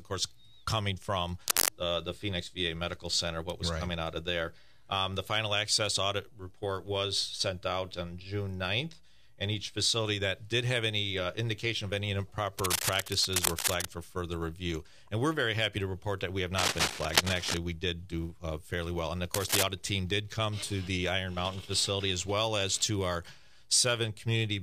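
A worn cable or connector likely shifting and changing contact resistance causes cable scratch noise: rough, uneven rustling bursts at 1.46–1.69 s, somewhat louder than the sound, then 12.58–13.87 s, 16.58–17.57 s and 19.34–19.64 s, about as loud as the sound.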